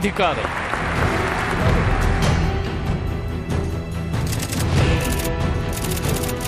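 No technical faults are audible.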